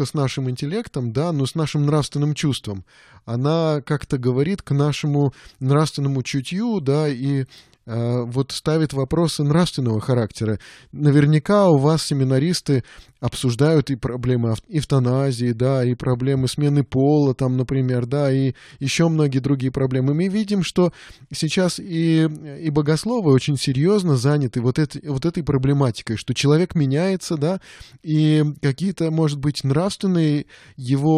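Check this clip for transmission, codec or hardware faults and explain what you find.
Nothing in this speech stood out as a problem, so there's nothing to flag here.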